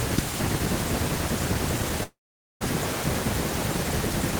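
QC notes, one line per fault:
2.03–2.63 s, long network dropout: the speech breaks off into a brief fading buzz, then roughly half a second of silence before resuming further on, about 0.58 s of speech lost. This likely comes from a stalled stream rather than an edit, since concealment decays instead of cutting cleanly.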